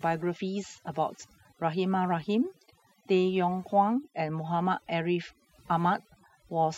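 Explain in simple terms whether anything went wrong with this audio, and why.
Something did go wrong here: the whole clip has overdone noise removal. Someone ran a noise reduction tool far too hard on a noisy recording. It shuts off any slice of the sound that looks close to the background hiss, and the softer parts of the speech get caught in that too. So from start to finish the pauses drop to near silence with little twinkly specks.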